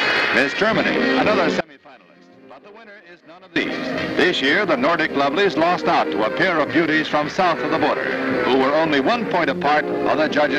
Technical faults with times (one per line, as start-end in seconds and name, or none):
1.61-3.56 audio dropout to a faint residue